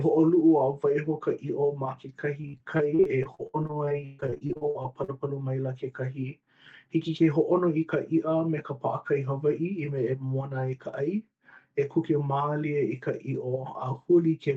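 From 2.41 to 5.10 s the speech breaks up with repeated packet loss, giving a robotic sound. Many short holes, the longest 139 ms, are patched by stretching the last sound, roughly 29% of the stretch. Unlike a single dropout, this keeps recurring, producing choppy sound with pieces missing over a dull, band-limited call sound.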